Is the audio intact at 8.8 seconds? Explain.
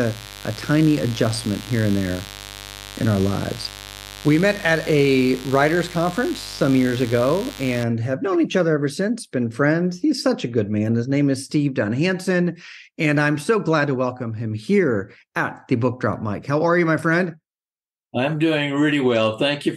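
Yes, the audio is intact at 8.8 seconds, with the speech running through that moment without any dropout, glitch or distortion.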